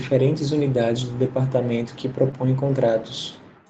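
Just after "unidades do", from 1.25 to 1.27 s, one 20 ms packet was lost and rebuilt from its error-correction copy. It sounds briefly rougher, a grainier, noisier sliver on the spectrogram with no gap.

From 2.31 to 2.46 s, a short concealed packet loss lost 20 ms and filled 10 ms with continued sound. It gives a brief wobble, with a smooth crossfade in the waveform, stretching timing by about 15 ms.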